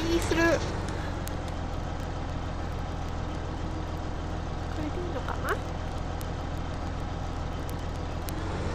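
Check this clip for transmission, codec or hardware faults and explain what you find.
One fault runs through the clip. From 0.12 s to the end, word clock ticks recur about every 30 ms as sharp, uneven clicks. The receiving clock drifts several hundred ppm from the sender's and drops or repeats one sample at each slip.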